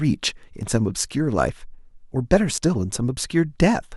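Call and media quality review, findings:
A small jump in the speech at 0.63 s and 1.49 s, likely a dropped buffer (overrun) losing about 10 ms each; waveform shows a hard discontinuity, spectrogram a thin broadband vertical line.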